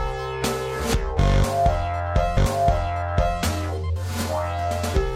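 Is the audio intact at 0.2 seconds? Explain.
Yes, the audio at 0.2 seconds is intact, with no dropout, click, distortion or other fault at that moment.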